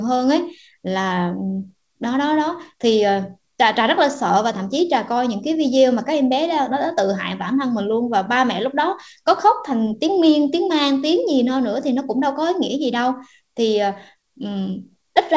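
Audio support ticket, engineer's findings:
Nothing to flag here: the speech comes over the call path as you'd expect, with nothing above 8 kHz, which fits a wideband G.722 link at 64 kbps.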